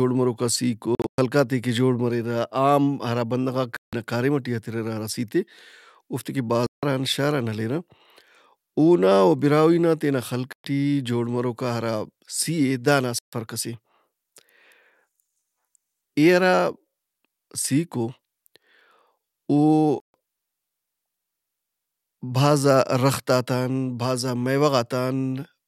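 Sharp-edged silent gaps cut the speech at 0.95, 3.77, 6.66, 10.53, 13.19 and 20.00 s, each 0.12 to 0.23 s long. These are likely Bluetooth dropouts, with late packets discarded. The speech resumes further on, as if it had kept playing. The first gap, between "مروکا سِیک" and "خلقاتے کہ جوڑ", is broken into pieces. Across 0.95 to 1.18 s about 186 ms is missing, and the longest piece is 116 ms. The second gap ends just before "کاریم ئٹی", and the third follows "اوفتے کہ".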